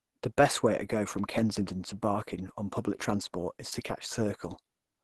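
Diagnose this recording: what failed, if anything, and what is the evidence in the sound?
Opus compression throughout, at the codec stage: the speech sounds hoarse and muffled, which fits a likely Opus hybrid-mode encode near 16 kbps.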